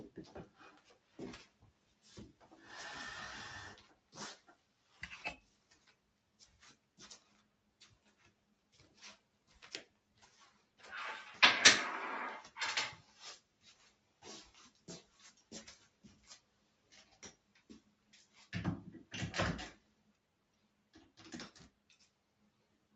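A speech-tuned noise suppressor was left on for music or sounds throughout. It treats held tones and tails as noise, so the level pumps and swings by about 10 dB. Sound cut by the noise suppressor shows up at 0.98–2.04 s, 3.95–10.79 s, 13.41–18.1 s, 19.81–20.93 s and 21.71 s to the end. Sustained parts sink by up to about 6 dB while the sharp attacks slip through.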